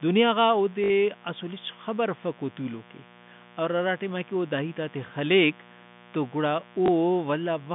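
From the first moment to the end, a mains buzz at 60 Hz sits roughly 25 dB under the speech, a steady raspy hum. On a spectrogram it shows as evenly spaced horizontal lines at multiples of 60 Hz, stretching up through the telephone band the G.711 coding passes.

Packet loss with the last packet repeated appears at 0.84 to 0.90 s, a 60 ms gap filled by replaying one chunk, which fits three 20 ms packets. It gives a brief robotic stutter with a 50 Hz buzz. The waveform shows identical repeating blocks. A shorter 20 ms repeat at 6.86 s leaves a small blip.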